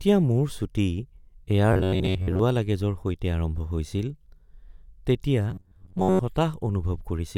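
Robotic sound from repeated short buffers appears from 1.73 to 2.39 s and again from 5.51 to 6.20 s. The speech turns into a rigid, metallic buzz locked at 93.8 Hz. The likely cause is a playback path that repeatedly looped a slice of about 10.7 ms while most of the incoming audio was skipped.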